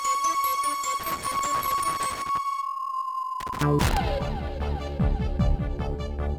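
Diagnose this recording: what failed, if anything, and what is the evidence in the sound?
The failure is in the analogue wiring: loose connector crackle. Irregular bursts of scratchy crackle run from 1.00 to 2.38 s and again from 3.40 to 3.97 s. A worn or dirty contact is making and breaking as it moves. That chops the signal.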